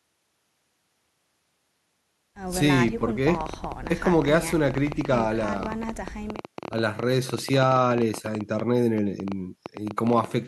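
Interference from nearby equipment or a faulty connection or power supply is the likely source of a train of clicks that runs from 3.35 s to 10.25 s. Over that stretch it injects short pulses of much the same shape at an uneven pace, about 11 per second and around seventy in all. They peak roughly 5 dB above the speech, so the ticking and popping sits on top of the voice and carries on through the pauses.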